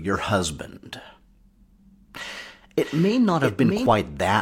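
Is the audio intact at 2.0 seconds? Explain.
Yes, the audio is intact at 2.0 seconds, with no fault present at that moment.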